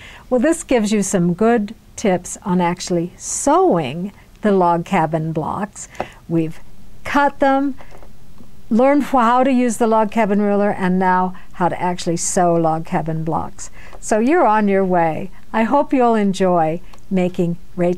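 At 6.38 s a DC step shifts the waveform's zero line by about -28 dBFS, and the offset holds to the end. A single low thump marks the jump while the sound carries on unchanged. The waveform sits off-centre afterwards, and a spectrogram shows a brief broadband stripe at the jump.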